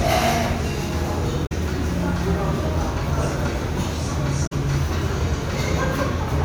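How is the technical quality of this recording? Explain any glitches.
Two short glitches mar the recording, both from damaged data in a compressed stream: at 1.43 to 1.52 s and at 4.43 to 4.53 s. In each, corrupted bytes made the decoder misread frames and hunt for the next valid header, producing a brief glitch about 0.09 s long.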